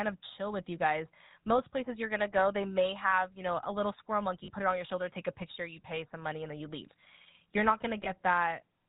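Across the whole speech clip there is a buzzy, gravelly roughness, with a clear ceiling near 4 kHz that leaves sibilants dull and clipped. This is the GSM full-rate codec. It models the vocal tract and excites it with a thinned-out train of regular pulses, so fine detail in the voice is replaced by coarse, grainy texture. The damage is plainly audible, which fits a 13 kbps full-rate stream.

At 4.44 s, right after "know a little squirrel" and before "put it on your", the sound briefly freezes into a short metallic ring lasting until about 4.50 s. At 8.04 s a shorter ring of the same kind holds until about 8.09 s. These are lost GSM frames. The decoder replaced each missing frame by repeating the settings of the last good frame. The first gap is about 40 ms, consistent with two lost frames, and the second is about 20 ms, consistent with one.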